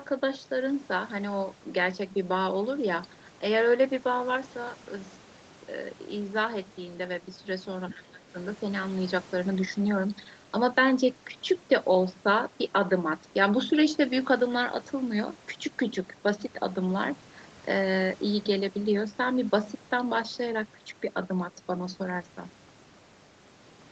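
From 7.89 to 7.94 s, the echo canceller likely failed to remove loudspeaker pickup: the other side's voice leaking through appears as a brief, faint scrap, roughly 20 dB below the talker. Between 7.9 and 8.35 s, the canceller, likely faced with both sides talking at once, turned everything down. This speech suppression in double talk dips the talker's voice by up to roughly 20 dB for about 0.4 s.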